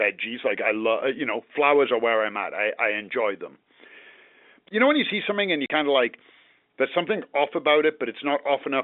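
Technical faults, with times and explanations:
5.66 to 5.70 s, packet loss filled with silence: a 40 ms hole cuts into the speech, which fits two lost 20 ms packets replaced by silence. The hole has hard edges. The waveform shows a flat gap, the spectrogram a blank vertical stripe.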